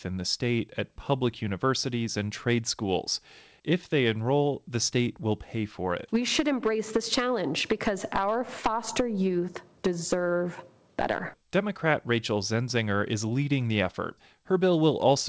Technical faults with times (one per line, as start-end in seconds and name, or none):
none